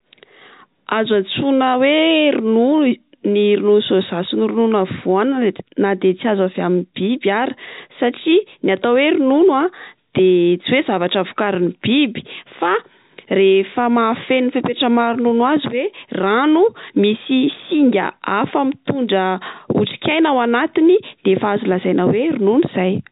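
Nothing's wrong with this speech clip: it's ordinary G.711 telephone audio, topping out around 3.8 kHz the way a phone line does, with no faults to point to.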